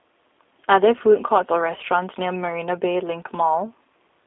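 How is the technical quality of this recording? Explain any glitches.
The quality is limited by narrowband low-bitrate coding that runs through the whole recording. The fault is the G.729 codec, present from start to end. The codec rebuilds the speech from a vocal tract filter, a pitch predictor and a few pulses per 5 ms subframe rather than sending the waveform itself. The line passes only about 250 Hz to 3.6 kHz, and the artefacts are plainly audible: a slightly rough, buzzy, synthetic edge on the voice, which fits an 8 kbit/s codec. On a spectrogram, energy stops sharply near 3.6 kHz and is thin below 250 Hz, and harmonics look smeared.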